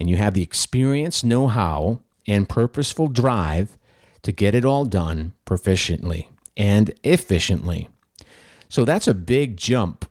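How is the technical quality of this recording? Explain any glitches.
Nothing goes wrong anywhere in this recording, so there are no glitches to explain.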